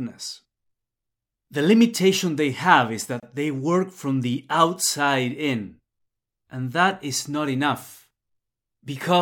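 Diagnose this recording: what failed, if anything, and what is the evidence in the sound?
Codec stage: a gap at a join of encoded pieces, roughly 27 ms of silence from 3.20 to 3.23 s, right after "limitation they have is". Untrimmed encoder delay and padding got stitched in.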